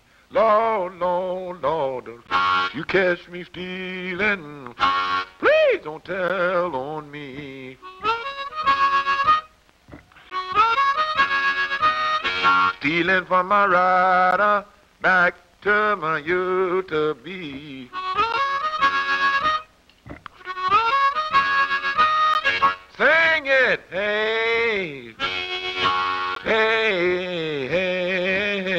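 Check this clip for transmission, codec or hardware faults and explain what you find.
One fault, a gap between chunks, repeats through the clip.

At 2.27, 6.29, 10.30, 14.31, 18.32, 22.34 and 26.35 s, the audio arrives in 4-second chunks with about 13 ms of silence inserted at each join. These are brief hard-edged dropouts, shown as flat waveform segments and thin vertical blank stripes on a spectrogram.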